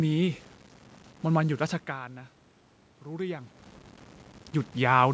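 Throughout the speech, low bit depth without dither is audible. The signal was likely rounded to very few steps with no dither, which fits a 7-bit signal. The error follows the speech, so quieter syllables turn gritty, with grainy distortion roughly 30 dB below the voice.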